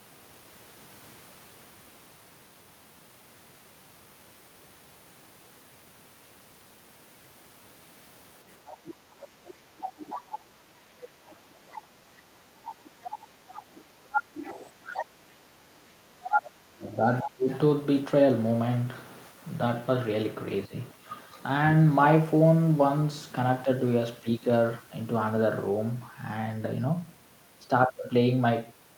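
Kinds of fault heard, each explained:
Other side's voice leaking through: A second voice sits under the talker in several patches, most likely far-end sound from a loudspeaker that the echo canceller left in. It rises from faint, about 20 dB down, to roughly equal level around 16.2 s.
Speech suppressed in double talk: Between 14.78 and 17.48 s, while that second voice overlaps, the talker's speech dips in pieces totalling about one and a half seconds, dropping by up to roughly 30 dB, likely from the canceller clamping down during simultaneous talk.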